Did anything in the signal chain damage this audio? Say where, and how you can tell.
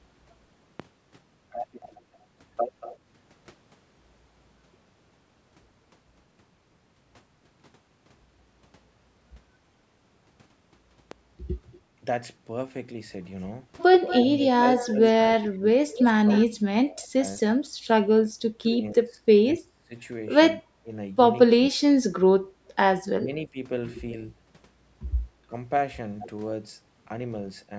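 Yes. Two loud pops sit in the analogue or driver stage, at 0.80 s and 11.11 s. Each lasts about 26 ms and peaks roughly 15 dB above the speech, while the talk carries on underneath. On a waveform each shows as an isolated spike standing well clear of the envelope. On a spectrogram it is a thin vertical stripe running across all frequencies. A voltage step, likely from a plug, switch or driver glitch, entering the chain would produce exactly this.

An echo leak from call processing is audible at 1.82–2.97 s, 11.72–11.80 s and 14.07–16.45 s. A delayed copy of the speech trails the original by 235 ms. It is about 20 dB down in the first stretch, very faint in the second, and only about 10 dB down in the third. On a spectrogram the harmonic patterns repeat, fainter, shifted 235 ms to the right. The cause is likely a far-end echo canceller leaving loudspeaker pickup in its outgoing signal.

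Speech suppressed in double talk, also a call-processing fault, runs from 14.25 to 21.81 s. It overlaps the strongest echo, and about 3 s in total is affected, with the voice dipping by as much as 30 dB. Shorter dips follow at 23.22–23.57 s, of about 10 dB, and at 25.47–25.54 s, of about 15 dB. The waveform envelope shows sudden hollows mid-phrase, and the spectrogram shows energy, especially the upper bands, vanishing in patches. This is likely an echo canceller turning the talker down while both sides spoke.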